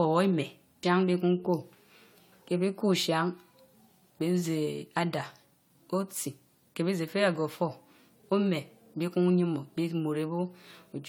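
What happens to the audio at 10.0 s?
Swirly, hollow and smeared, with blurred consonant attacks, as throughout the clip: generation loss, likely from roughly four successive AAC-LC re-encodes near 96 kbit/s.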